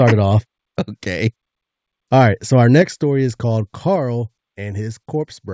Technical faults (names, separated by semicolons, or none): microphone overload; microphone volume stepped down